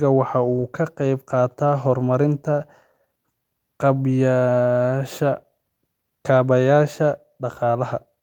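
No faults are audible anywhere in the speech recording.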